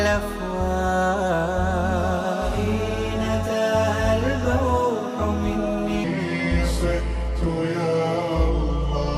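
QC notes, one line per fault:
6.04–9.17 s, section at the wrong speed: from 6.04 s to the end, the audio plays at 0.785 times its original rate, so everything in this stretch is both slower and lower, dropping about four semitones at the boundary. Because speed and pitch move together rather than one being corrected independently, the sound turns deep and sluggish. The likely cause is a resampling or playback-clock mismatch applied to this final segment only.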